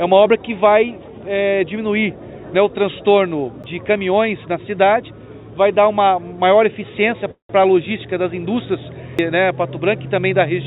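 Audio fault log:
3.63 s and 9.18 s, CD skip: each is a short tick where playback mutes very briefly, then resumes from a different point on the disc. The laser has jumped to a neighbouring turn of the spiral, so the audio lands one or more revolutions ahead or behind. That makes the continuity break abruptly rather than fade. The sudden discontinuity at the mute edges produces the click, and the jump by a whole turn causes the displaced, out-of-place continuation.
7.31–7.51 s, call audio freeze: the sound stalls and is stretched into a decaying buzz-like fill about 182 ms long. Roughly 130 ms of that fill sits at or near silence before playback resumes exactly where it left off. Nothing is lost, but everything after this point arrives about 182 ms later. This is likely a jitter buffer running dry while packets were delayed in transit, with the receiver concealing the wait. The band-limited, telephone-like character around it, with nothing above 4 kHz, fits a G.711-type call codec.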